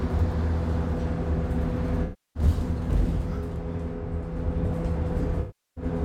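AAC frame loss with concealment strikes twice: around 320 ms of frames drop at 2.03–2.43 s and about 360 ms at 5.40–5.84 s, leaving the decoder to rebuild the sound from the last good spectrum. Each gap turns into a smeared, noisy patch.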